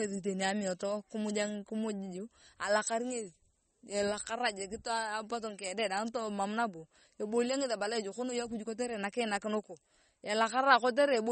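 From start to finish the speech carries plainly audible damage that is likely MP3 compression at a low bitrate, consistent with about 32 kbps. With too few bits, the encoder cuts everything above 8.4 kHz and drops weak frequency lines that flicker on and off between frames, giving a watery, swirling texture and chirpy sibilants. On a spectrogram there is a hard ceiling at 8.4 kHz and speckled, patchy holes below it.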